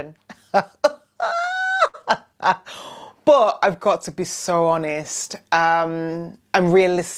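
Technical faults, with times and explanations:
1.87–1.96 s: short stall from a late packet. A packet arrived late, the jitter buffer emptied, and the receiver stretched the last sound for 62 ms before resuming at the same point, so nothing is lost. The held sound has a slight buzz or dip. On a spectrogram this shows as flat, repeated harmonic bands.
2.02–2.05 s: short concealed packet loss. About 40 ms of audio never reached the decoder. The receiver filled only 11 ms by extending the preceding sound and then blended back, which shortens playout by roughly 30 ms. It is heard as a brief smear or wobble. The waveform shows a short splice where content is missing.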